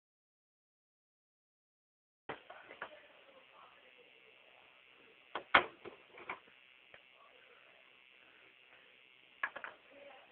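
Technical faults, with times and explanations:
0.00 to 2.29 s, audio dropout to silence: the clip opens in dead silence with no room tone before the sound arrives, likely the input dropping while zeros kept being written.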